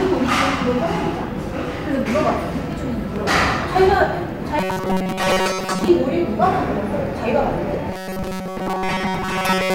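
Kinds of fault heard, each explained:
Robotic sound from repeated short buffers: a rigid 188 Hz metallic buzz, likely a 5.3 ms chunk looping; spectrogram shows evenly spaced harmonic stripes, waveform identical repeating cycles.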